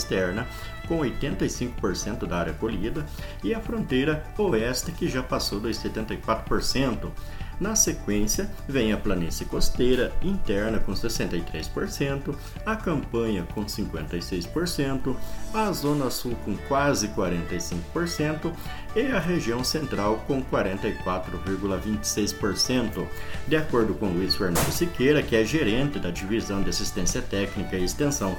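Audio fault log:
5.15 s, dropped samples: a single sharp click, seen as a thin vertical line across the spectrum. The likely cause is a handful of samples missing from the stream, so the waveform leaps straight from one value to a later one. The gap is only a fraction of a millisecond, far too brief to take out any sound, which separates it from a dropout, where a stretch of audio audibly goes silent or missing.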